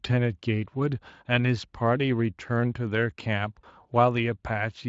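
A speech recording with a single dropout from VoIP packet loss concealed by the speech codec, between 3.61 and 3.65 s. About 20 ms of audio is missing, which fits one lost 20 ms frame, and the decoder fills the gap by extending the preceding pitch and spectral envelope at falling gain. The result is a brief stretched, fading sound, and the voice stays weak or distorted for tens of milliseconds or more after the stream resumes. The Speex coding underneath is light, consistent with a fairly high-quality Speex mode.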